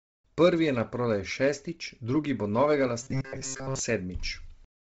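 From start to finish the speech has a breathy, grainy edge, and there's nothing above about 7.8 kHz. That's the signature of Bluetooth LC3 compression, likely running heavily squeezed at something like 24 kbps with short 7.5 ms frames. At that rate the codec throws away much of the upper spectrum and fills the gaps with noise, so the top end sounds hissy and synthetic instead of crisp.

From 3.03 to 3.80 s the speech collapses into a stiff, metallic buzz pinned at 134 Hz. That's robotic sound from repeated short buffers. Fresh audio likely wasn't arriving in time, so the player kept looping the last tiny chunk, skipping most of the real signal through that stretch. A 134 Hz buzz means each repeat lasts roughly 7.5 ms, which fits the frame size. The buzz still loosely tracks the speech underneath.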